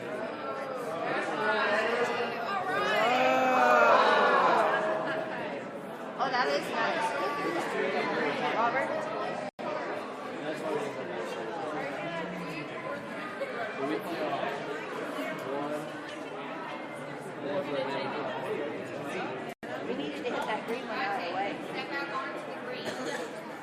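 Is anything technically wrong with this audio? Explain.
Yes, there are two kinds of fault. At 9.49 s and again at 19.53 s there's a gap between chunks: the audio arrives in 10-second pieces, and each join gets 100 ms of dead silence, so you hear a short hole with nothing actually lost.

At 14.85 s you get compressed frames skipped. A few 20 ms frames never got decoded, so the audio jumps ahead by around 70 ms.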